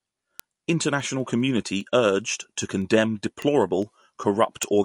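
Word clock ticks run through this speech clip from 0.19 s to 4.83 s, sharp clicks of uneven strength about five times a second, roughly twenty in all. A receiver free-running against its source clock, off by something like 100 ppm, slips a single sample each time the two clocks drift past each other. MP3 compression colours the whole clip, with nothing above 11.3 kHz and a plainly audible watery, swirling quality. That is likely from a low-bitrate encode, around 48 kbps, where the encoder dropped the treble and let weak frequency lines flicker on and off between frames.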